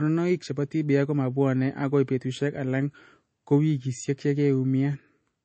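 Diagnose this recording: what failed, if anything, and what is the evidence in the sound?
The codec stage failed, with MP3 compression the likely cause, audible throughout the speech. Nothing sounds above 8.3 kHz, and the plainly watery, swirling texture points to a low bitrate around 32 kbps. A simple low-pass filter would dull the treble without that swirl.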